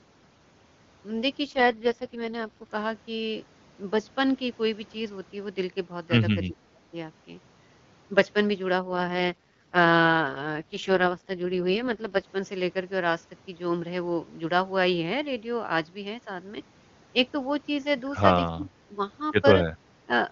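From 1.45 to 2.72 s, and again from 8.78 to 12.26 s, there is an AMR rate drop. The full-rate HD Voice sound turns rough and raspy, which fits a switch from 23.85 to the 6.6 kbit/s mode. The bandwidth stays the same and nothing drops out, so this is coding roughness rather than a level loss.

At 6.43 to 6.81 s the voice dips by roughly 25 dB for about a third of a second. The same happens at 18.52 to 19.0 s for about half a second, and briefly at 20.06 to 20.1 s by roughly 15 dB. This speech suppression in double talk is likely an echo canceller ducking the talker while the far side spoke. Unlike the rate drop, this is a fall in level.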